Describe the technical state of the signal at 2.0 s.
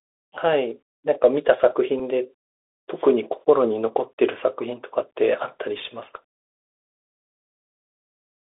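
At 2.0 s there is a Bluetooth headset packet repeated. One packet of about 3.8 ms was lost between headset and phone. The decoder replayed the previous packet's bits in its place. Being a single repeat, it sounds like a small, brief tick in the speech.

Underneath sits the Bluetooth CVSD headset codec, present throughout. The line passes only about 250 Hz to 3.6 kHz, which fits 64 kbps CVSD. Its adaptive one-bit steps plainly roughen the speech. Sibilants turn scratchy over a granular hiss.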